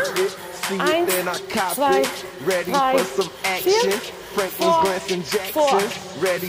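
Nothing stood out as a technical problem on listening.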